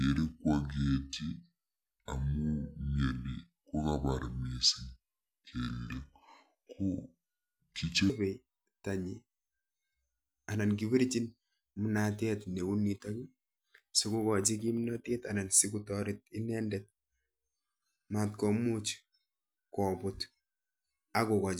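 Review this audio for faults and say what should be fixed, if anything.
From the start to 8.1 s, the speech is a section at the wrong speed: it comes out deep and dragging, about seven semitones low, then snaps back to normal pitch and pace. The section runs at 0.668 times its proper rate, so pitch and tempo fall together. It likely comes from an edit or playback step that read this segment against the wrong clock, stretching it out. The fix is to resample that opening section to its correct rate. Checking that every segment's sample-rate setting matches the project clock before export would prevent this.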